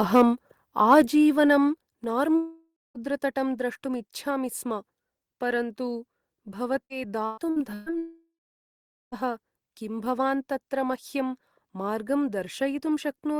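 Microphone overload shows at 0.15 to 0.22 s and again at 0.91 to 1.0 s. Peaks are squared off with a harsh crackle, likely from input gain driving the converter about 3 dB and then about 1 dB past its limit.

At 1.02 s the level drops suddenly by about 6 dB, then at 2.04 s by another 4 dB. This is a microphone volume step-down, likely the call software cutting input gain after those clipped peaks.

From 2.35 to 2.98 s comes a long network dropout. About 600 ms of audio never arrives, likely lost in transit. A fading buzz fills the gap, ending in roughly 240 ms of silence before the sound resumes.

Repeated packet loss makes the sound robotic from 6.85 to 7.89 s. Four gaps, the longest 122 ms, are patched by stretching the last sound. About a third of the stretch is filled this way, so it sounds choppy.

A second long network dropout runs from 7.98 to 9.15 s. Roughly 1.14 s of audio is missing, likely lost on the network. 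A fading buzz gives way to about 830 ms of silence before the audio returns further on.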